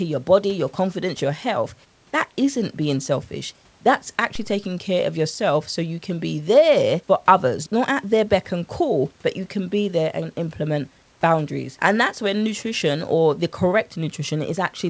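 At 4.35 s, just before "taking care of yourself", a DC step occurs: the waveform's zero line suddenly jumps to a new offset, as when a converter recalibrates or an input carrying an offset is switched in. It is heard as a single low thump. The offset then drains away, which fits a high-pass around 2 Hz pulling the baseline back. Unlike a packet-loss glitch or dropout, the speech carries on without a gap or smearing. Above it, the call path's cutoff near 8 kHz stays steady.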